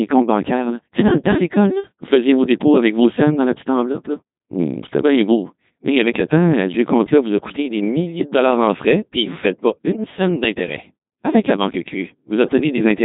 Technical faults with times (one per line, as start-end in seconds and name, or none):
0.00-13.05 Codec 2 vocoder